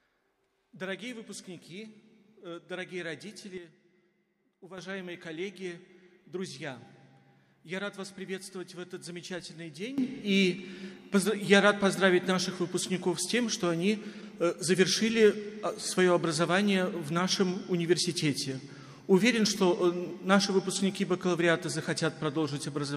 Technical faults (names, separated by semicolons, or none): sudden gain jump